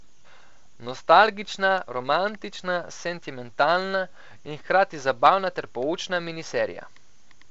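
Nothing stood out on listening to this speech, which comes through G.722 wideband telephone coding with its content ending a little below 8 kHz.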